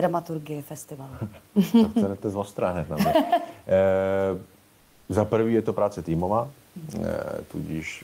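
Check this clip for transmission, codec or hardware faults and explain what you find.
One fault: comfort noise in place of the background, from 4.79 to 5.07 s, just before "za prvý je to". For about 280 ms the room's textured background noise gives way to a steady, featureless noise about 1 dB quieter. This is likely discontinuous transmission, where the sender pauses and the receiver synthesises filler. Unlike a noise gate or dropout, the gap is never silent, only smoothed.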